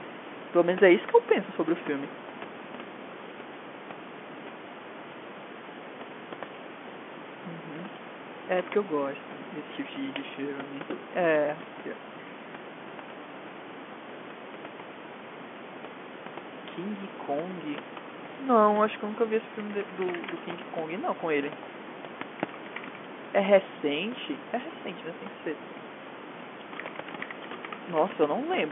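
Listening to the speech in this recording, nothing stood out as a technical problem.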